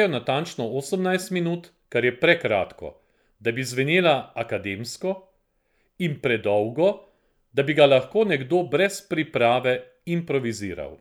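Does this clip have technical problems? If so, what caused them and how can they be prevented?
No, no technical problems can be heard in this speech clip. With nothing gone wrong, there is no cause to trace and nothing to prevent.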